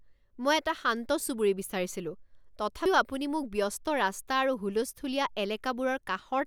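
At 2.86 s, just before "আপুনি মোক ব্যস্ত", compressed frames are skipped: roughly one frame, which fits an 85.3 ms frame, is missing, so the speech jumps ahead.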